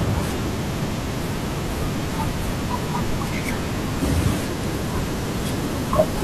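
No technical faults can be heard anywhere in the recording: the signal stays continuous and steady throughout, with nothing breaking into or disturbing the speech.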